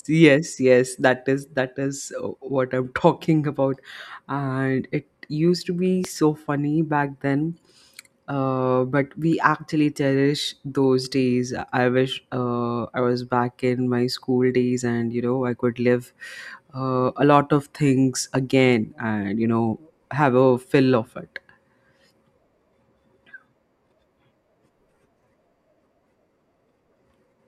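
At 6.05–6.08 s, after "it used to be", a loud pop, likely a voltage spike, peaks about 10 dB over speech: a waveform spike, full-height spectrogram stripe.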